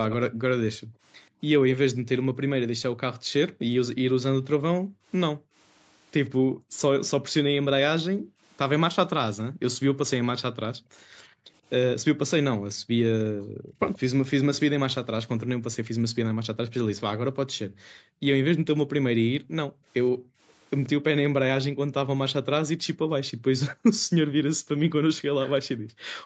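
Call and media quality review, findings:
Call and media quality review, findings:

Echo leak: a delayed copy of the speech trailing the talker by about 130 ms. Heard at 0.10–0.15 s, 10.80–10.84 s, 12.77–13.99 s, 16.14–17.82 s and 19.43–20.89 s. Level roughly 15 to 40 dB under the direct speech, most noticeable near 0.1 s and 19.4 s. Likely the far end's loudspeaker audio reaching its microphone, with the echo canceller leaving residue that was sent back.

Background gated by the echo canceller: the room tone dips and drops out, then returns when the gate releases. Spans 0.31–13.79 s (dips totalling about five seconds, deepest about 40 dB), 15.37–16.10 s (about 0.3 s, shallow, about 11 dB) and 17.65 s to the end (deep, about 40 dB). The canceller's suppression pulls the microphone down hard while loudspeaker playback is active.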